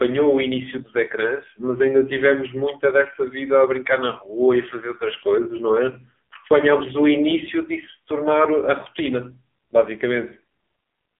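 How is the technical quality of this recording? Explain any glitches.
The quality is poor throughout, with one fault. An AMR narrowband mobile codec runs the whole 11 seconds: speech is rebuilt from a vocal-tract model fed sparse pulses, and nothing above 3.6 kHz survives, with a line band of about 250 Hz to 3.5 kHz. Damage is heavy, giving a thin, buzzy, synthetic voice, which fits a low mode near 6 kbps.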